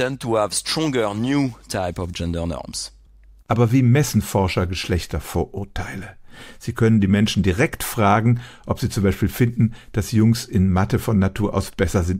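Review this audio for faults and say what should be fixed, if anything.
No faults found in the speech recording, so nothing needs fixing.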